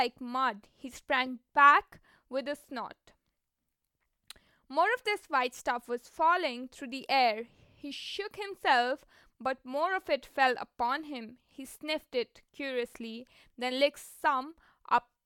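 No technical faults can be heard anywhere in the speech recording, with the signal holding steady and intact throughout.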